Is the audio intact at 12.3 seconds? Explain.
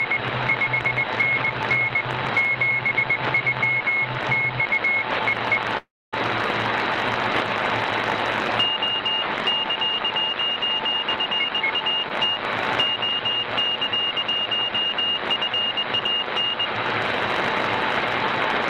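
No. A skip ahead occurs at 12.34 to 12.38 s: roughly 150 ms of sound was discarded, and playback jumps forward with only a brief bridge.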